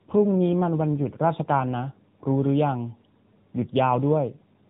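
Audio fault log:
throughout: tandem speech coding. The speech is narrowband, with nothing above 3.8 kHz, and sounds like two AMR-NB passes in a row, rougher and more warbly than one codec alone.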